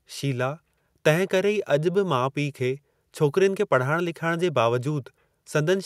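Nothing in this speech recording stood out as a technical fault on listening.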